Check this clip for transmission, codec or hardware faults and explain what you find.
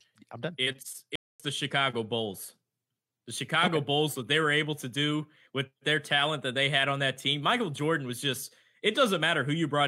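There is one fault, a playback stall in the speech. From 1.16 to 1.40 s the player likely ran out of buffered data or had its output thread blocked, so nothing reached the output for 241 ms. The speech drops abruptly into silence mid-flow, then picks up again once playback recovers.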